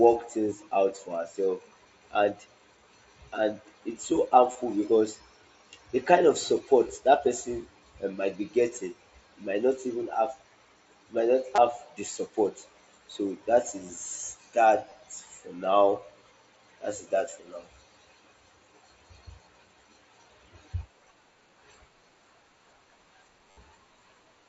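Concealed Bluetooth headset packet loss occurs at 4.52–4.55, 6.89, 11.55–11.58, 14.90 and 23.51–23.57 s. Lost headset packets were filled with repeated recent waveform. The 60 ms gap near the end buzzes, with a slight warble on recovery, over the mSBC band limit of 8 kHz.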